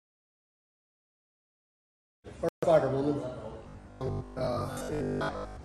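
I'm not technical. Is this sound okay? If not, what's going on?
No. From 2.49 to 2.64 s the sound drops out briefly, then resumes a bit further on: a Bluetooth dropout, likely from wireless packets arriving too late. From 3.59 s to the end it turns into a rigid, metallic 50 Hz buzz. This robotic sound from repeated short buffers likely comes from a 20 ms chunk being replayed while most of the real audio is skipped.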